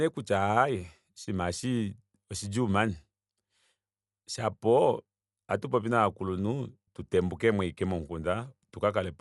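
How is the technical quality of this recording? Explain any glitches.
The technical quality is compromised throughout, with plainly audible codec damage from start to finish. The speech sounds dull and muffled, with nothing above about 11.4 kHz, and a rough, fluttering noise clings around the voiced tones. The likely cause is Dolby Digital compression at a low rate, which fits roughly 64 kbps. Starved of bits, the encoder narrows the band and leaves many frequency lines without mantissa data, and the decoder fills those gaps with dither noise, producing the grainy flutter.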